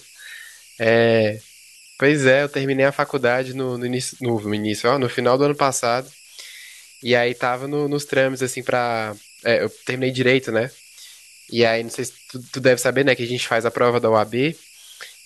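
Throughout the speech there are converter idle tones: a whistle somewhere around 3 kHz, sitting about 28 dB below the signal. An undithered delta-sigma converter, given very small input, settles into repeating bit patterns that produce the tone, so it is exposed in pauses and turns grainy under quiet syllables. Unlike steady interference or mains hum, its pitch follows the input's offset.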